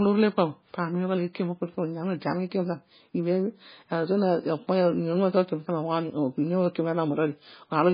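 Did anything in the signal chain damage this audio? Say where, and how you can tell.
Yes. MP3 compression, throughout: the speech is dull, with nothing above 5 kHz, and swirly and watery, likely from a starved MP3 encoder at a very low bitrate, around 16 kbps.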